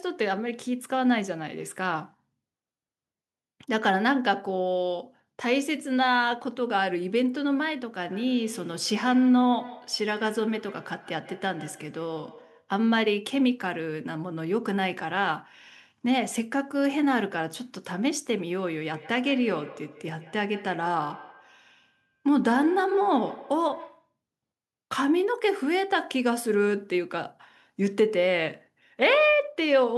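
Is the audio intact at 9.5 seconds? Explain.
No, 9.5 s falls inside a feedback echo between two devices running from 8.04 to 12.73 s. A second device replays this microphone's signal, which is picked up again, so each syllable returns about every 150 ms, thinner and ringing, up to about 18 dB below the speech. On a spectrogram, each syllable is followed by fainter, narrower copies evenly spaced in time.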